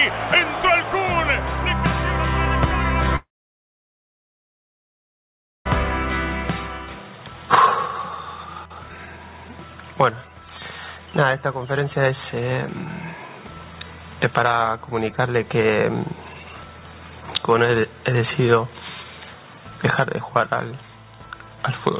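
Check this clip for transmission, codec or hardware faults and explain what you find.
One transmission fault stands out: a long network dropout from 3.16 to 5.67 s. The audio arrives through a call path that carries nothing above 4 kHz, which fits a narrowband codec such as G.711.

For about 2.5 s no new sound comes through. The receiver likely stopped getting packets and stretched the last sound it had into a short, fading buzz. What follows is near silence for roughly 2.4 s. The audio then resumes, and the missing stretch never returns. On a waveform, the envelope shrinks through a brief decaying tail to an almost flat line. A spectrogram shows a smeared band that fades out, then an empty gap until full content returns at 5.67 s.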